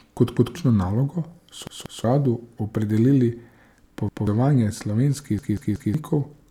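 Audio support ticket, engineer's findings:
Stutter in the speech: a chunk of about 186 ms replays with a hard seam at each join. At 0.37–0.56 s, 1.67–2.04 s, 4.09–4.27 s and 5.39–5.94 s it repeats once, twice, once and three times. The replays replace roughly 0.2 to 0.5 s of fresh audio each. Repeated buffer: playback underrun, so the output device re-sent its last block. The block length fits an 8192-sample buffer.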